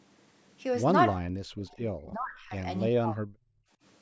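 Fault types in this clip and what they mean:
Speech suppressed in double talk: the voice sinks twice by roughly 40 dB, likely the echo canceller mistaking overlapping talk for echo and clamping down hard.
Background gated by the echo canceller: the canceller clamps the mic during playback, so room tone ducks about 25 dB near 3.6 s, then returns.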